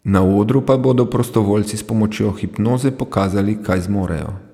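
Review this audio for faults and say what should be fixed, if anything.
No faults; nothing needs fixing.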